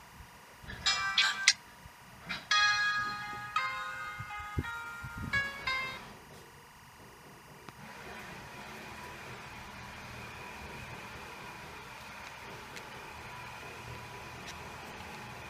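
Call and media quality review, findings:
Timecode bleed: LTC from adjacent track/cable leaking into audio path, whole clip. Steady chirping warble near 1 and 2 kHz, roughly 20 dB under programme; cadence fits 23.976 fps code.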